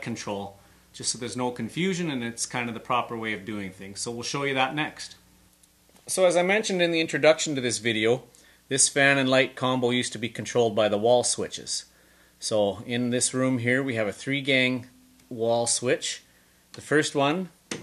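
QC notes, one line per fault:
Nothing stood out on listening; the audio held steady and gave no cause for comment at any point.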